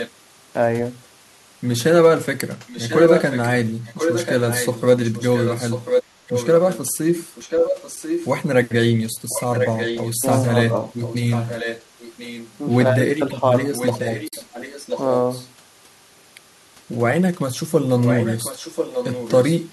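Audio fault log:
0.0–0.11 s, 2.68–3.5 s, 3.85–6.79 s, 7.35–8.29 s, 9.29–12.57 s, 13.74–15.47 s and 18.03–19.57 s: echo leak. A second copy of the speech trails the original by about 1.04 s. It is strongest at 2.68–3.5 s, near the level of the direct speech, and about 5 to 10 dB lower elsewhere. This is likely loudspeaker pickup at the far end that the echo canceller did not fully remove and that was sent back. On a spectrogram the harmonic patterns repeat, shifted right by about a second, and overlap the live speech.
7.96 s and 14.28–14.33 s: AAC frame loss with muting. At 7.96 s a 10 ms gap appears, and at 14.28 s a 50 ms gap follows. The decoder zeroed the missing frames, and the overlapping windows ramp the level down and back up, so the holes sound soft. The waveform shows a brief taper to silence, and the spectrogram shows a clean vertical blank band across all frequencies.
13.4–13.56 s: speech suppressed in double talk. 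The speech dips briefly, by around 5 dB, in short pieces adding up to roughly 50 ms. When both sides spoke at once, the echo canceller likely could not tell the local talker from the loudspeaker echo, so it attenuated both. The waveform envelope shows small notches, and the spectrogram shows momentary fading.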